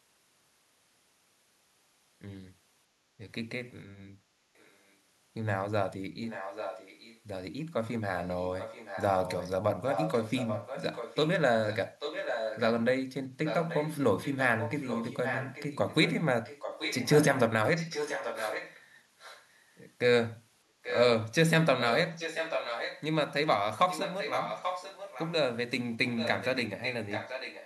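Echo leak runs through the speech at 4.56–4.94, 6.23–7.2, 8.23–12.63, 13.45–19.45, 20.83–21.04, 21.8–23.03, 23.89–25.33 and 26.06 s to the end. A delayed copy of the voice trails the original by 836 ms. It is barely audible at first, becomes clearly present, and is strongest, only about 5 dB under the speech, around 21–25 s. The likely cause is a far-end loudspeaker echo canceller letting its microphone pickup through. On a spectrogram, the harmonic patterns reappear shifted about 0.84 s later and fainter, and the waveform shows the gaps filled in.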